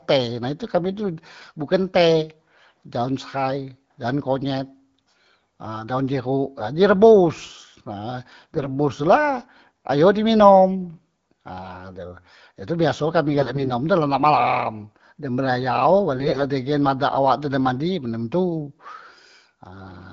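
Speech clip over the AMR wideband (HD Voice) codec with four bursts of AMR bit errors: 1.41–1.52 s before "bukan teh daon sehai", 8.54–8.68 s, 13.34–13.70 s between "biaso kami" and "tu la nak malam", and 16.14–16.44 s between "nak malam dem berayau" and "dengen badan awak tu". In each burst pitch and level hold, but the sound turns hoarse, scratchy and gargly. Flipped low-priority bits slip past the frame checksum, misplacing excitation pulses and skewing the gain and spectral values.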